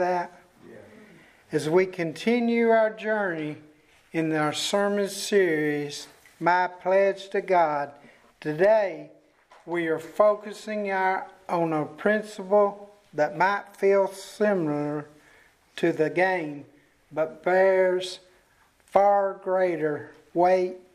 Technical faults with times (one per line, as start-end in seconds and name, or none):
4.42-6.42 pre-emphasis left on